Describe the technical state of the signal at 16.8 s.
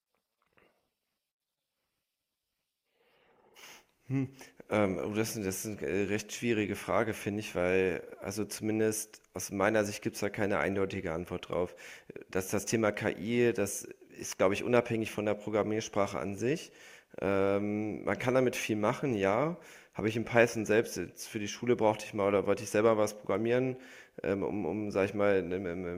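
At 16.8 s the speech signal is intact, with no audible dropout, distortion or other technical fault at that moment.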